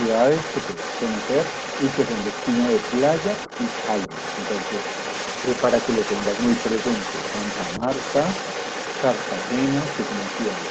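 From the very start and right through to the end, a second voice sits underneath the main talker, roughly 10 dB down. That's the other side's voice leaking through. The likely cause is the talker's device playing the far end on a loudspeaker, with the echo canceller failing to strip all of it from the microphone. So you hear this fainter, secondary speech running in parallel.

Then at about 5.15 s there's a call bitrate drop. The bandwidth estimate fell and the Opus encoder went from 32 kbps down to 15 kbps. It stayed at that lowest rate for about 3.25 s and had recovered by about 8.47 s. With half the bits, the coding gets coarser, and the speech turns rougher and a bit watery through that stretch. Since the call path already tops out at 8 kHz, this section ends up sounding dull and grainy compared with what's on either side of it.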